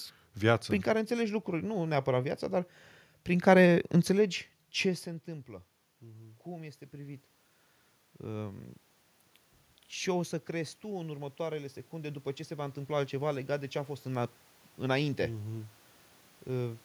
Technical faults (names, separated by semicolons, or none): automatic gain rising